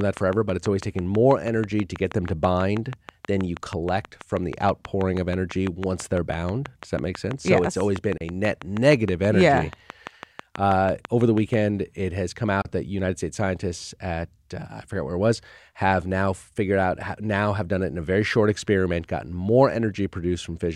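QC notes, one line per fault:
0.01–11.55 s, train of clicks: regular ticking at about 6.2 per second, roughly seventy near-identical clicks peaking around 10 dB above the speech, audible in pauses too. They stop just before "it has come". Likely interference or a struggling interface injecting repeated pulses.
8.17 s and 12.62 s, Bluetooth dropout: two silent holes of about 29 ms each. The second falls between "it has come" and "that united states scientists". Speech resumes as if it had kept playing. Likely late packets dropped on the wireless link, consistent with two packets lost per gap.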